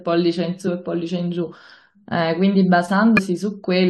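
Speech with two brief glitches at 0.66–0.68 s and 3.17–3.19 s, each about 20 ms long, caused by damaged data in a compressed stream: corrupted bytes make the decoder misread those frames and lose sync before recovering at the next valid frame header.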